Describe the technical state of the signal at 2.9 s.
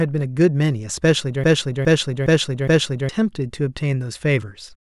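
At 2.9 s the speech sits inside a broken-record loop from 1.44 to 3.09 s. One 413 ms fragment replays identically four times back to back, likely because a stalled player or stream kept resending its last fragment. Unlike an echo, no new audio continues beneath the repeats.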